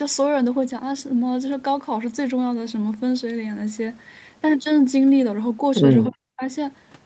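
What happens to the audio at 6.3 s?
Between 6.09 and 6.42 s the speech sinks sharply, falling by roughly 40 dB at its deepest so that it nearly vanishes for about 300 ms before returning. This is speech suppressed in double talk, likely caused by both ends talking at once: the echo canceller could not tell this talker apart from the loudspeaker echo it was trying to remove, so it turned everything down together, including the wanted speech.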